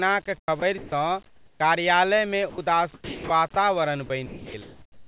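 From 0.38 to 0.92 s the speech is chopped by the voice detector: about 260 ms of quiet syllables and word edges give way to flat synthetic noise, so the sound stutters, likely from discontinuous transmission switching on and off.

From 1.26 to 1.6 s comfort noise replaces the background. The room noise, about 41 dB below the speech, turns into a smooth, featureless hiss about 7 dB quieter. This is likely the receiver generating noise while the sender paused.

At 2.5 to 2.58 s, 80 ms of sound is dropped by the voice detector. A soft part of the speech is likely misjudged as background, and steady noise fills the gap until transmission resumes.

The chopping returns from 2.94 to 3.56 s (about 380 ms replaced) and from 4.06 s to the end (about 780 ms replaced). Throughout, the G.711 call path leaves nothing above 4 kHz.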